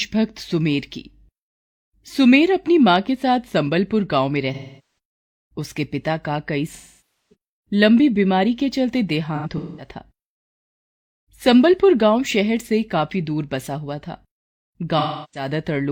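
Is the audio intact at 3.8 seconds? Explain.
Yes, the speech at 3.8 seconds is intact, with no dropout, click or other fault at that point.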